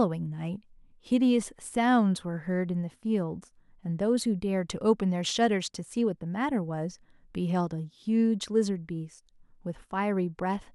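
Listening to this speech recording, nothing technically wrong stood out at any point.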